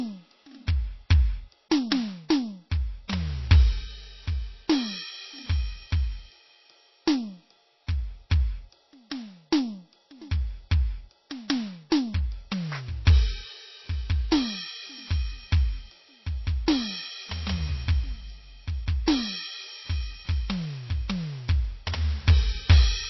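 Music, and heavy lossy coding is the likely cause of its dull, watery tone: MP3 compression at a very low bitrate, which fits about 24 kbps, leaves nothing above 5.8 kHz and plainly audible swirling artefacts. At 3.08 s, pre-echo spreads quantisation noise about 13 ms ahead of a sharp attack, so a brief hiss precedes it and the hit sounds smeared.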